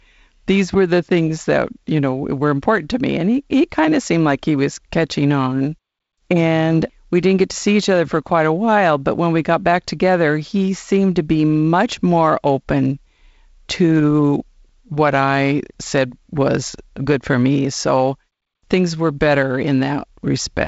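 No technical faults can be heard in this speech.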